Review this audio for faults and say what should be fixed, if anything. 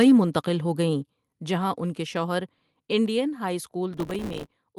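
The microphone input gain was likely set too high, so peaks drove the converter about 4 dB past full scale from 0.00 to 0.12 s. With a sizeable share of the waveform flattened at the limit, the opening sound gets a harsh, crackling edge. Lowering the input gain so peaks stay a few decibels below full scale prevents this.

The call software likely detected that hot, clipping input and cut the device's input volume by about 4 dB in a single step at 1.02 s, between "ہو گئیں" and "جہاں ان کے شوہر". Speech and background drop abruptly together at that point. Setting a sensible input level from the start, or using gradual gain control instead of a single step, avoids the jump.

From 3.94 to 4.51 s the processor could not finish its very short audio buffers on time, which fits buffers of a few milliseconds each. Dozens of these deadlines were missed in a row, and each miss left a tiny hard-edged gap of silence. 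Together they produce a gritty crackle over the speech that stops once the load eases. Reducing CPU load or enlarging the audio buffer would prevent it.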